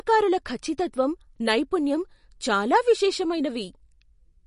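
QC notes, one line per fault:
Throughout, MP3 compression: nothing above 10.6 kHz, and speech sounds watery and swirly as weak lines switch per frame, likely from an encode near 40 kbps.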